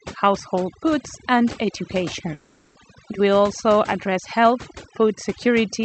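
Speech with overdone noise removal throughout: frequency bands near the noise floor are gated away, leaving twinkling specks, seen as a spectrogram's black background dotted with isolated bright flecks. From 2.33 to 2.77 s there is a gap, likely a long network dropout, filled with a fading buzzy continuation of the last sound; the waveform shows a smooth decaying envelope and the spectrogram shows smeared, structureless energy. Above this, the call codec's band limit appears as a flat ceiling near 8 kHz.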